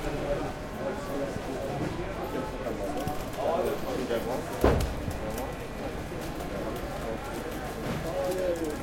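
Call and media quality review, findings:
No audible faults found; no action required.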